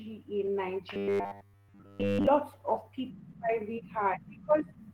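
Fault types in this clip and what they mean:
Clock drift between sender and receiver: The far end's audio clock is running fast, roughly 4 percent ahead of the playback side. The receiver's buffer keeps overfilling, so it has to keep throwing small slices away to catch up. You don't hear the drift directly. What you hear is the steady stream of little fixes it forces, spread across the whole clip and never quite settling down.
Repeated timing corrections: From about 0.47 s to 4.77 s the receiver keeps trimming short bits out to keep pace with that fast sender, which works out to playing the speech at around 105 percent speed. The cuts all go the same direction but land at uneven spacing, so the speech has a faintly hurried, slightly lurching tempo with the odd tiny hiccup rather than any obvious gap.
Robotic sound from repeated short buffers: Between roughly 0.94 s and 2.27 s the speech collapses into a rigid, metallic buzz pinned at 100 Hz. 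It still loosely tracks the speech's shape, but almost none of the real audio gets through. The likely cause is playback looping the last short chunk of audio over and over while fresh data fails to arrive, and a 100 Hz buzz fits a 10 ms chunk being repeated.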